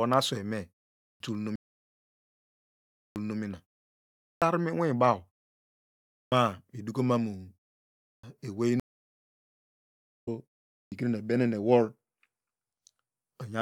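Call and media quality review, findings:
Clipped start after a pause: onsets at 1.03, 2.98, 4.25, 6.13, 8.07 and 10.74 s begin abruptly, about 0.16–0.19 s of speech missing each time. Likely output device sleeping during 0.34–1.42 s gaps, waking too late.

Stream reconnect: dropout 1.56–3.39 s, about 1.39 s of silence, then playback resumes 0.44 s earlier, repeating material as the server resends a burst. Second at 8.80–10.28 s, about 1.44 s silent, resumes roughly 1.5 s later, content skipped. Connection dropped, fresh decoder started mid-stream.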